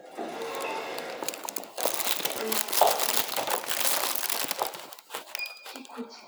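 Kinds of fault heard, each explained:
No technical faults can be heard; the signal holds steady throughout, with no breaks, distortion or interference at any point.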